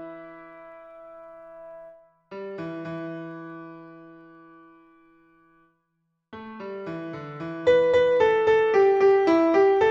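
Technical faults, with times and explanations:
0.11–9.87 s, clock slip clicks: a fine regular rattle of single-sample drops or repeats roughly every 50 ms, around 200 in all, likely from two unsynchronised clocks differing by about 500 ppm, so a whole sample of error accumulates about twenty times per second.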